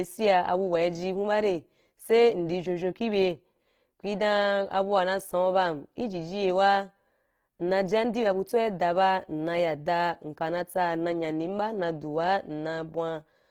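Throughout, the speech sounds rough and grainy, likely from Opus compression at a low bitrate near 16 kbps; the spectrogram shows noise-filled bands reaching 20.4 kHz, with few holes.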